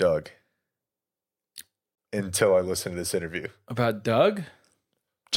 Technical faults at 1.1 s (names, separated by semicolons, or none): none